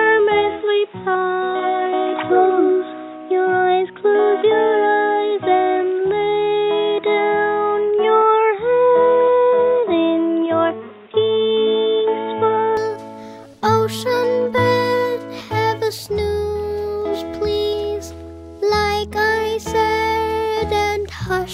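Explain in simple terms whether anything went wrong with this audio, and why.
For the first 12.77 seconds the sound is dull and boxy, with nothing above about 3.8 kHz, then it clears up with no gap. That likely points to the input being switched to a poorer device.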